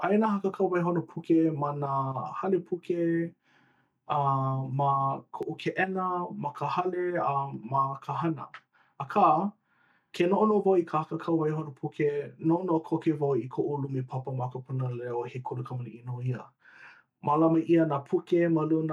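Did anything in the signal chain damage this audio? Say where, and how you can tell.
Yes: an underrun with held sample at the driver buffer, 5.43 s. The waveform freezes flat for 0.67 ms, which fits a 32-sample stall. About 0.7 ms of audio was lost meanwhile.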